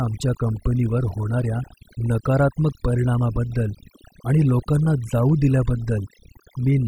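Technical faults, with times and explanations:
Throughout: overdone noise removal. A noise reduction stage set far too aggressively keeps cutting individual frequency bands whenever they sit near its noise estimate, taking the softer parts of speech with them, so the background drops and breaks up into twinkling specks.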